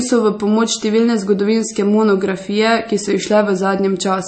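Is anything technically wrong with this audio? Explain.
Yes. Throughout, the speech sounds watery and swirly, with smeared consonant attacks and nothing above about 8.4 kHz. This is likely MP3 compression at a low bitrate, fitting about 32 kbps, where the encoder cuts the treble and drops weak frequency components that flicker between frames.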